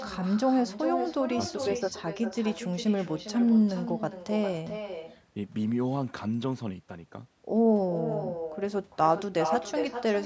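Speech from a call, with an echo with no canceller running the whole way through. Every phrase returns as a second copy roughly 0.4 seconds later. The copy sits about 10 dB below the direct speech. It sounds thinner than the original. The far end is playing the call over a loudspeaker, and its microphone picks that sound up again. Nothing removes it before it is sent back. The band stops at 8 kHz, as call processing does.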